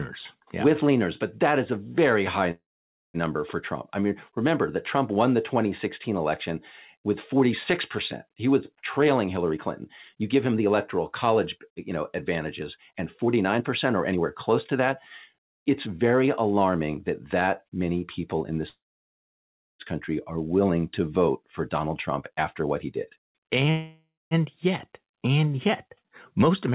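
Speech coming through a narrowband call path, with nothing above 4 kHz, which fits G.711 mu-law. There are three call audio freezes, at 2.51 to 3.17 s, 18.69 to 19.82 s and 23.70 to 24.34 s, where the sound trails off into a fading tail and then goes quiet for roughly 0.5 s, 1 s and 0.2 s. Likely the jitter buffer ran dry while packets were held up. Nothing's lost, since the speech resumes right where it stopped. You'll also hear jitter buffer speed-up at 8.82 to 11.92 s (110%), 12.61 to 16.28 s (108%), 21.42 to 23.70 s (107%) and 26.02 to 26.72 s (106%). The receiver is trimming small pitch-period slices to work off the extra delay, so the talking sounds rushed while the pitch stays put.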